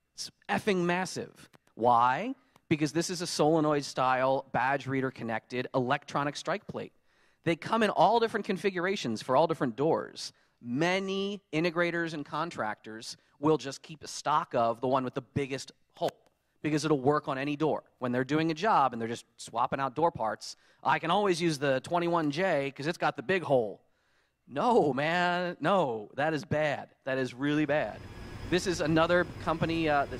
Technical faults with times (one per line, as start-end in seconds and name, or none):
none